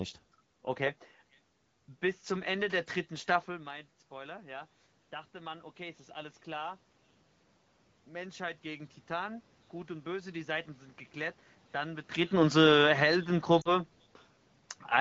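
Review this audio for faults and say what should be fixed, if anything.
Lost AMR speech frames occur from 13.61 to 13.79 s. About 40 ms of speech, consistent with two dropped frames, failed its error check, and the decoder filled the gap by repeating its last pitch and vocal tract settings at falling gain. The sound briefly fades toward near silence, then returns weak or rough. On a spectrogram the harmonics run flat and dim before recovering, and the waveform envelope sags across the gap.

To prevent it, improve the radio link or use stronger error protection so fewer frames fail their checksum.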